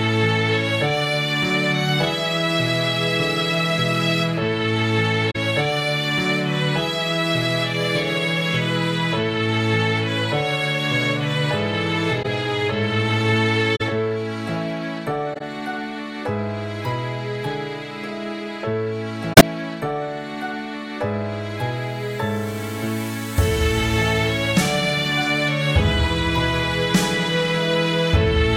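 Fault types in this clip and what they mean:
Corrupt frame concealed: The decoder caught damaged AAC frames and covered them. Brief concealed spans, about 30 to 100 ms long, occur near 5.3, 12.2, 13.8, 15.3 and 19.3 s.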